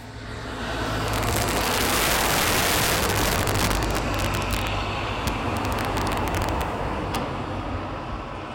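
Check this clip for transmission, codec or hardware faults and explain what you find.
One fault runs through the whole clip: integer overflow. Loud peaks snap into violent, sharp cracks, harsher than clipping. The signal is pushed about 8 dB too hot, so a small fraction of samples exceed the integer limit and wrap to the opposite sign instead of being held at full scale.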